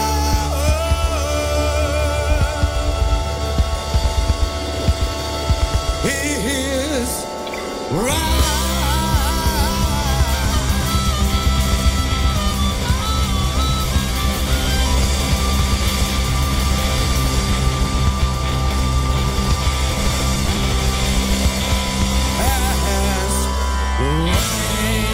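The processor fell behind between 19.89 and 20.72 s and missed the deadline for its small audio buffers again and again, pointing to buffers of around 5 ms, with about fifteen dropped across that stretch. Each late buffer was skipped rather than filled, so the audio jumps ahead with a hard edge at every miss. Packed together, those skips come through as a burst of processor overload crackle riding on the sound that ends once the load eases.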